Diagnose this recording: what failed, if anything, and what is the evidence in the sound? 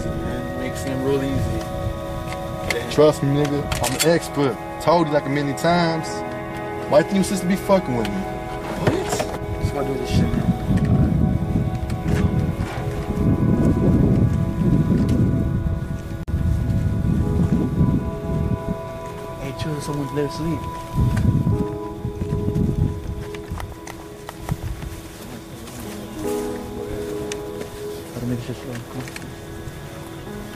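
The failure sits at the codec stage: the recording was built from pieces encoded separately and then joined without trimming, leaving a gap at a join of encoded pieces. Each encoder pass left its leading delay and last-frame padding in place, so at 16.23 s the continuous sound drops into silence for about 47 ms, to 16.28 s, with edges smeared by the codec, then resumes exactly where it stopped.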